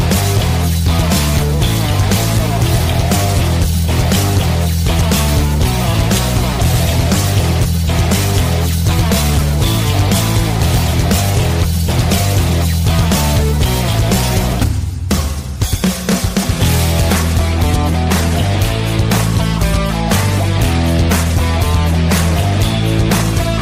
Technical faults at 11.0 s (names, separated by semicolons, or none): hard clipping